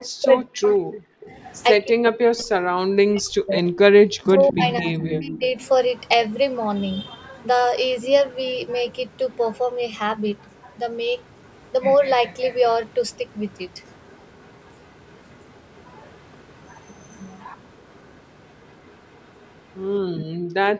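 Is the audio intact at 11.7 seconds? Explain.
No. At 11.7 seconds the clip is at the tail of an echo leak running from 10.52 to 11.71 s. A very faint copy of the speech trails it by about 217 ms. This is likely a far-end loudspeaker echo that the canceller failed to fully remove.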